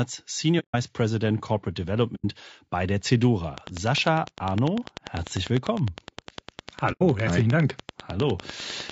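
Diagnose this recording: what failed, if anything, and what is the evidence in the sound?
The codec stage shows damage throughout the speech. The voice sounds rough and grainy, with noise filling the gaps between harmonics and a top band that sounds thin and synthetic. This is most likely low-delay AAC compression (AAC-ELD) at a low bitrate, around 32 kbps. Its short frames resolve pitch harmonics poorly, so on a spectrogram the harmonic lines look smeared, with a hazy floor between them and a high band that looks patchy rather than detailed.

AAC frame loss with muting, a network-side loss handled by the decoder, leaves three soft-edged holes: 0.59 to 0.75 s, about 150 ms and consistent with five lost frames; 2.15 to 2.25 s, about 90 ms, just before "bei der"; and 6.92 to 7.02 s, again 90 ms. The decoder zeroed the missing spectra, and the overlapping windows fade the sound out and back in. 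The waveform shows tapered gaps, and the spectrogram shows clean vertical blank strips.

A train of clicks runs from 3.58 s, just after "bei der", to 8.91 s. That is roughly 50 near-identical pulses at a regular rate of about 10 per second, peaking about 15 dB above the speech and audible in pauses too. The likely cause is interference from nearby equipment coupling into the analogue wiring or interface. On the waveform these appear as evenly spaced spikes. On the spectrogram they form thin full-band vertical lines spaced about 0.1 s apart.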